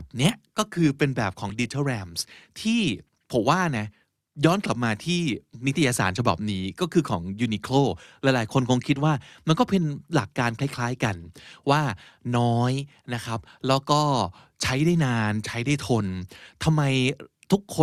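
Overlap between stream segments at 1.49 s and again at 13.47 s: two adjacent segments of the speech stream, each about 4 s long, claim the same stretch of time, so roughly 15 ms is trimmed at the join and the waveform jumps, heard as a brief click or skip.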